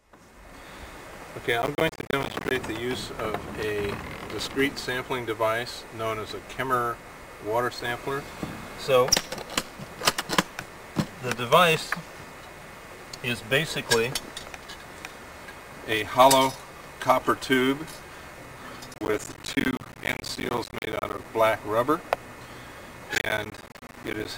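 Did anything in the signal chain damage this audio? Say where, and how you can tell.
Yes, at the driver or buffer stage. Processor overload crackle appears from 1.62 to 2.51 s, 18.94 to 21.25 s and 23.15 to 24.25 s as a gritty tearing laid over the audio. The processor kept missing its deadlines, and each missed block was left as a hard-edged hole of silence. The fine grain of the crackle fits buffers of around 10 ms. Dozens of dropouts pile up in each burst, about a hundred in the longest.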